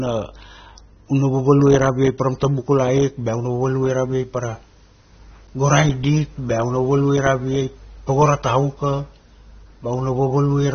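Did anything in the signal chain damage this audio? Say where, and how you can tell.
Yes, at the codec stage, and it runs through the whole speech clip. Nothing is heard above about 6.3 kHz, so the sibilants sound dull and smeared, with a fizzy, warbling edge. That pattern likely comes from AAC compression at a low bitrate, around 24 kbps. The AAC-LC encoder drops high bands it can't afford and coarsely quantises the rest. On a spectrogram there's a hard ceiling near 6.3 kHz, with patchy holes below it.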